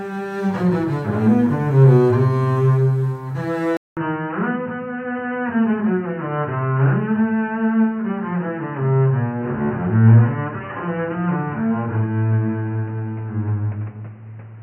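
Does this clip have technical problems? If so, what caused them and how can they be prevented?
Yes. The recording input was most likely switched to a poorer device at 3.77 s, such as another microphone or a headset's call profile. After a gap of about 0.2 s the sound returns through a much narrower path, with nothing above 3 kHz, so it turns dull and boxy. It also comes back about 5 dB quieter, with a new background noise floor roughly 30 dB below the signal, and stays that way to the end. Locking the input device in the system settings and disabling automatic switching, including to headset call profiles, prevents this.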